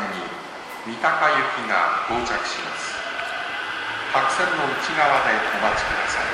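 Loud pops at 2.59 s and 5.48 s, each a single sharp pulse standing about 10 and 15 dB above the sound, likely from an electrical voltage spike.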